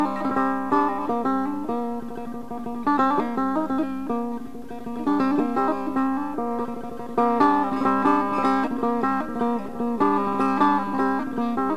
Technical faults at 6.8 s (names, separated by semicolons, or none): none